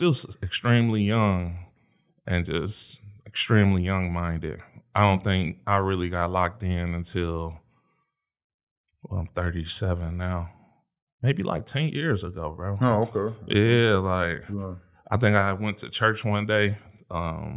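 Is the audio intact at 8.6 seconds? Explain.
Yes, the speech at 8.6 seconds is intact, with no dropout, glitch or other audible fault at that moment.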